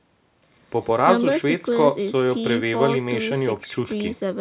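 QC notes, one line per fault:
No faults to note, one line being all there is.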